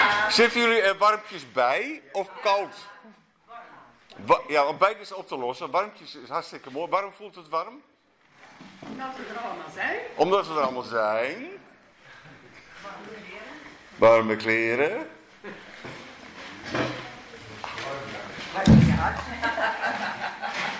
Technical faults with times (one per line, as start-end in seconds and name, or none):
none